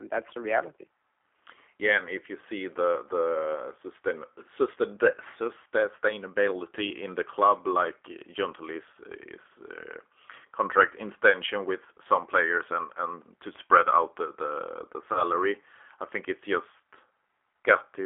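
G.729 codec damage runs through the whole speech clip. The codec models each 10 ms frame with a vocal tract filter, a pitch predictor and a few pulses instead of keeping the waveform. The sound points to the 8 kbit/s G.729A variant. Here the damage is plainly audible: the voice sounds rough and slightly synthetic. The line band of roughly 300 Hz to 3.4 kHz removes the low body and all the upper brightness.

VoIP packet loss concealed by the speech codec occurs from 15.13 to 15.24 s. About 30 ms of audio went missing, which fits a single lost packet. The decoder filled the gap by extending its last pitch and filter settings at falling gain, so the sound is briefly stretched into a buzzy tone or coloured noise and then fades. Each frame is built on the one before it, so the distortion lasts past the gap itself until about 15.24 s.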